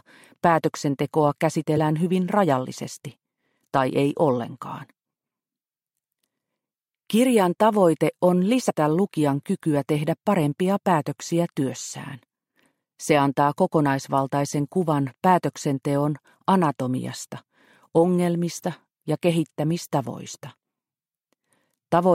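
At 1.77 s and 8.69 s, compressed frames are skipped: the decoder never plays whole frames, so the sound jumps ahead by around 70 ms and then around 50 ms. Unlike a dropout, no silence is heard; the audio simply jumps ahead at each join.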